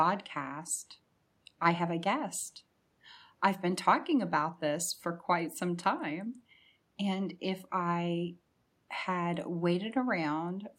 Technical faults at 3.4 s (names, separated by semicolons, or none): none